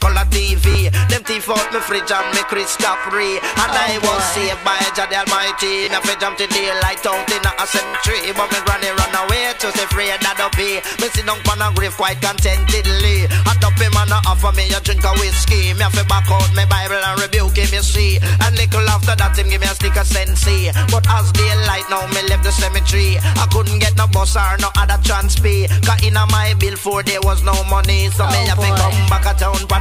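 A brief buzzing stutter cuts through the sound at 0.72 to 0.75 s and again at 5.84 to 5.88 s, each about 29 ms of repeated material. A longer machine-gun burst follows at 7.87 to 7.94 s, lasting about 73 ms. This is Bluetooth stutter: audio packets arrived late or not at all, so the receiver replayed its last short buffer until fresh data came. The two short gaps fit a couple of lost packets, the longer one around five. Each time, playback resumes further along, as if it had kept going.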